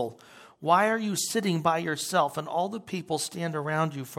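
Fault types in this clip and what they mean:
No technical faults can be heard in this speech recording. There is nothing to list for it.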